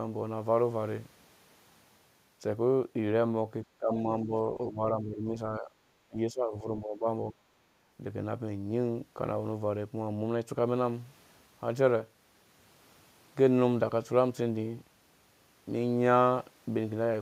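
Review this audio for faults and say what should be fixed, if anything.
Speech suppressed in double talk appears at 3.65–3.9 s, 4.23–4.32 s, 4.53–5.32 s, 5.59–5.75 s, 6.07–7.07 s and 7.3–7.39 s. The speech dips in level in short pieces, by roughly 10 to 25 dB at the deepest, the most affected event totalling around 0.7 s. The likely cause is an echo canceller that treated both ends talking at once as echo and pulled the near speech down with it. Better double-talk detection, with gentler residual-echo suppression, would keep the near talker intact.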